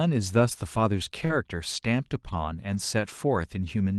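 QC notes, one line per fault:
1.25–1.31 s, short concealed packet loss: about 40 ms of sound went missing and was patched by extending the preceding sound, leaving a brief smear.
1.29–1.31 s and 2.73–2.79 s, lost packet rebuilt from error correction: low-bitrate copies filled 20 ms and 40 ms (fitting one and two packets), so these stretches sound rougher and noisier, with grainier spectrogram texture and no waveform gap.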